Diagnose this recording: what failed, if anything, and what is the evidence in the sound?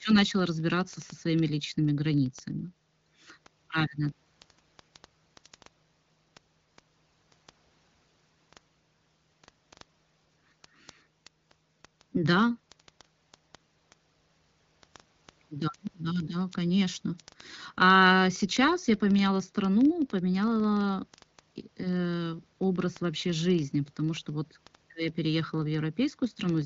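The failure is at the digital interface: word clock ticks. From 0.10 s to the end of the speech, sharp ticks of uneven strength repeat about every 40 ms, several hundred in all. The receiving device runs on its own clock, roughly 500 ppm off the sender's, so a single sample is dropped or repeated each time the clocks slip. Buffer underruns leave irregular gaps instead. The AMR-WB band limit near 7.5 kHz does not hide the ticks.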